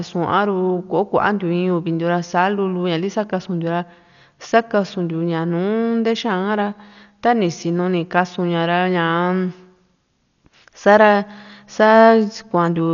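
A speech recording with heavy coding damage from start to finish. Nothing is heard above about 6.9 kHz, so the voice sounds dull and boxed in. A rough, fluttering noise clings to the tonal parts of the sound. These are the marks of Dolby Digital compression, the likely cause. It fits a low bitrate near 48 kbps. At that rate the encoder narrows the band. Many frequency lines get no detail and are refilled with noise.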